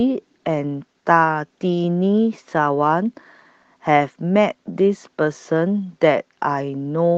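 Clock drift between sender and receiver runs through the whole speech clip. The sender's clock is about 3 percent slow, so the receiver's buffer keeps draining. Repeated timing corrections follow from 0.21 s to 7.10 s. The receiver stretches the audio, playing at 97 percent speed. This adds roughly a fifth of a second, heard as a slightly dragging, unsteady tempo.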